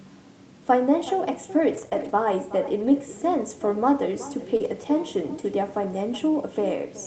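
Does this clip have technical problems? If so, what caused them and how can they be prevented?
Yes. The far end played the call over a loudspeaker with no echo canceller, so its microphone sent this audio back after a round trip of roughly 0.4 s. Throughout the clip, the talker's speech is trailed by a thinner copy about 15 dB quieter. Enabling acoustic echo cancellation on the far-end device, or having that side use a headset, would prevent it.

Packets were lost in transit, and the following packets' in-band Opus forward error correction copies stood in for them. Because those copies are low-bitrate, the rebuilt stretches at 1.73 to 1.87 s, 1.93 to 2.11 s and 4.60 to 4.66 s sound rougher and noisier, without a gap. A more stable network path, or a larger jitter buffer to absorb late packets, would reduce these losses.

Some audio never reached the decoder in time, so the receiver extended the preceding sound and blended back into the real signal. 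This produces a brief smear or wobble at 1.89 to 1.93 s, where 20 ms was missing, and at 4.57 to 4.62 s, where 40 ms was missing. Reducing packet loss and jitter on the connection would prevent this as well.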